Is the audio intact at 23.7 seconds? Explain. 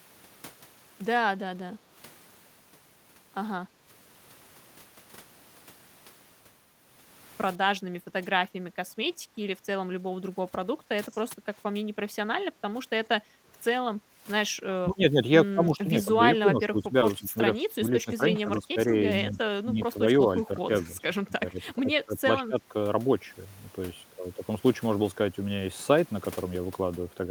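Yes, at 23.7 seconds the speech runs through cleanly, with no dropout, click, distortion or other fault to be heard at that point.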